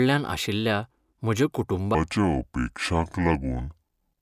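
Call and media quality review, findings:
Wrong sample rate, 1.95 s to end, after "आशिल्ल्या म्हज्या": speech drops low and slow together, 0.667× speed, about 7 semitones down. Fits 48 kHz audio played at 32 kHz in playback/resampler stage. Unlike a pitch shift, tempo falls too.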